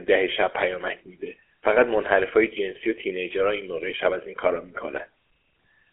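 Throughout the speech, the signal has passed through a GSM full-rate codec, which rebuilds the voice from a vocal-tract model fed by sparse, regularly spaced excitation pulses. The result is a plainly buzzy, gravelly roughness, squeezed into a telephone band of roughly 300 Hz to 3.4 kHz, with nothing above 3.6 kHz.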